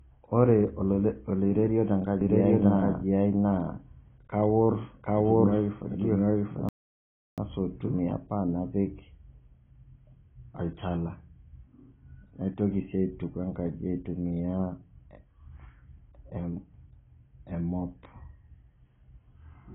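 A low-bitrate AAC encoder likely handled this speech from start to finish, and the heavy damage fits AAC compression at around 16 kbps. To save bits, the encoder lowered its cut-off and coarsely quantised what remained. The voice sounds dull and boxed-in throughout, with consonants blunted and a smeared, warbling texture on sustained sounds and sibilants as the encoder reshuffles its sparse bits from frame to frame.

From 2.21 s to 7.99 s there is a doubled audio track, most likely a second copy picked up by a slower path or left behind by an edit. The duplicate trails the original by roughly 0.7 s at about the same level. The speech seems to overlap itself, each phrase chased by a dry, uncoloured replay, and the copy cuts in and drops out abruptly at those two points.

Between 6.69 s and 7.38 s comes a playback stall, likely from the player running short of data or its thread being blocked. 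The output falls completely silent for 0.69 s in mid-flow before the speech resumes. This gap sits inside the doubled stretch.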